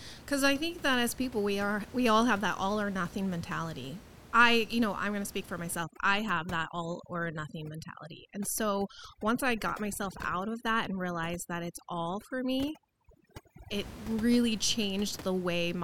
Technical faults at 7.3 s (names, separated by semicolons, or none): overdone noise removal